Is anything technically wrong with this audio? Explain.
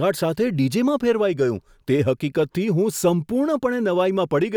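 No, nothing technically wrong stood out on listening to this speech recording.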